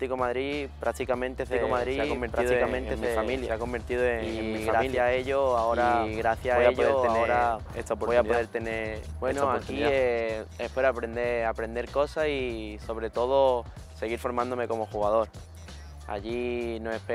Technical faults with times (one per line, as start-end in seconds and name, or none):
1.51-10.09 doubled audio track